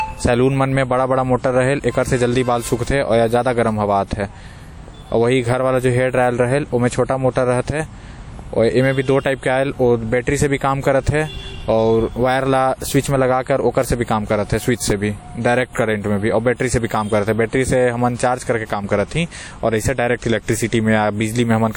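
The speech carries a ringing, washy quality from start to finish, with a hiss that rises and falls along with the signal and nothing audible above about 19.1 kHz. This is likely WMA compression at a low rate, which fits a bitrate around 48 kbps.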